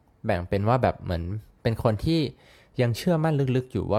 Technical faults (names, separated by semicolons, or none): none